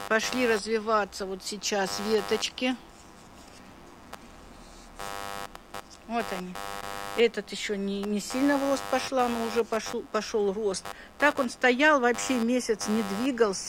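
Computer activity noise runs through the whole clip. Changing load from the processor, graphics card or mouse disturbs the ground the audio circuit shares. The result is a buzzing, chirping layer pulsing around 100 times a second, only somewhat quieter than the sound itself.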